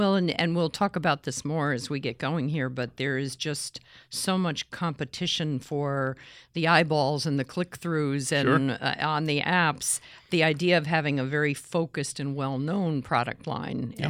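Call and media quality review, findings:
Nothing stood out on listening to the speech.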